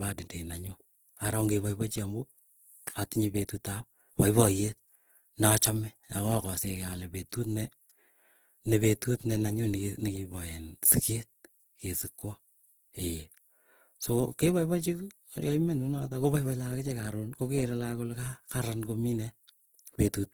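From start to end the speech sounds rough and grainy, its upper harmonics smeared into hiss. This is Opus compression, likely in CELT mode at a rate fitting about 16 kbps. A spectrogram shows speckled noise filling the bands up to 20.2 kHz.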